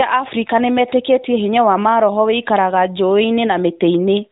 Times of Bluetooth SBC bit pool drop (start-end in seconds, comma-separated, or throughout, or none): none